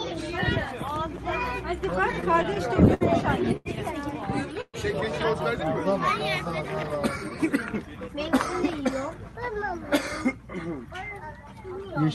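Between 1.91 and 3.03 s, packets kept arriving late or too slowly for playback, so the jitter buffer ran dry eleven times. This is repeated stalls, a stutter. Each time, the receiver extended the last sound until data returned, with the longest hold at 66 ms and about 157 ms of filler in all, roughly 14% of that stretch. Nothing drops out, but the sound catches and drags in a halting rhythm.

At 3.57 to 3.67 s comes a short stall from a late packet. One packet missed its slot, the buffer emptied, and the receiver stretched the preceding sound by 86 ms before resuming exactly where it had paused. Nothing is lost, but one moment lingers unnaturally long, carrying a faint buzzy quality as the repeated material wears thin.

From 4.61 to 4.76 s there is a call audio freeze. The sound locks into a held buzz that fades away, ending in about 50 ms of silence, and then picks up from the point where it stopped. 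This points to packets that were likely held up in transit, with the receiver bridging 127 ms of waiting. The result is a gap inserted into the flow rather than anything removed.

From 6.83 to 8.72 s, a jitter buffer speed-up occurs. The buffer had built up more audio than its target, so the receiver trimmed short pitch-period slices repeatedly to shed delay, about a fifth of a second in total. Playback runs at about 109% speed with pitch unchanged, so this stretch sounds rushed. All of this rides on an Opus call path whose top end stops near 12 kHz, consistent with a bitrate around 40 kbps.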